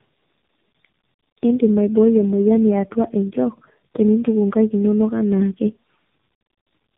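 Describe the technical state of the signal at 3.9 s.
Tandem speech coding is present at 3.9 s, as throughout the clip. The speech has been coded by three narrowband speech codecs in a row, each working on the last one's degraded output, so it sounds rough, muffled and warbly, with nothing above 3.8 kHz.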